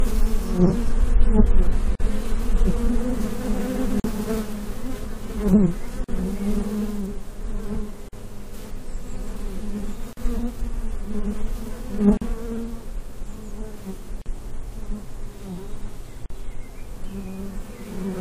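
A recording of sounds with a gap at a join of encoded pieces recurring every 2.0 s, at 1.95, 4.00, 6.04, 8.09, 10.13, 12.17, 14.22 and 16.26 s, each lasting 43 to 45 ms. The sound was encoded in separate pieces and joined untrimmed, so encoder start-up delay and last-frame padding leave silence at each seam. On a waveform these show as narrow dropouts with softened edges; a spectrogram shows thin vertical blank stripes before the sound resumes where it stopped.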